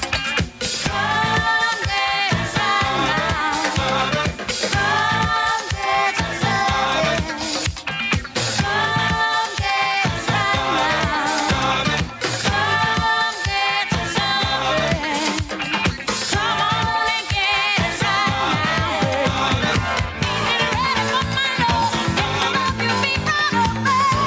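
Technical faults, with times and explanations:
Throughout, gain pumping: the level ducks by around 10 dB under each loud sound, squashing loud and soft parts, likely from gain set far too high with a fast limiter clamping peaks.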